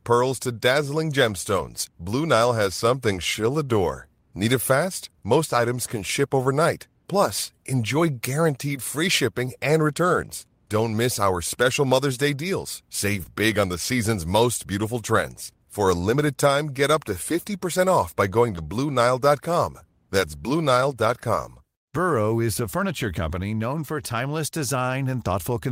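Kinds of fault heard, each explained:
Short concealed packet loss: at 13.23 s, just before "big on", and at 18.55 s, just after "off by going", about 20 ms of the call's audio arrived too late to be decoded. The receiver bridged each gap by extending the preceding sound, carrying on its pitch where it was voiced or substituting shaped noise where it wasn't, then crossfaded back into the real signal. Each spot is heard as a brief smear or wobble in the speech.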